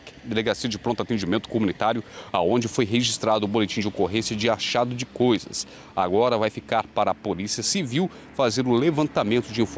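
Gain pumping runs throughout: the gain ducks by roughly 5 dB under each loud sound, likely from excessive gain hitting a fast limiter.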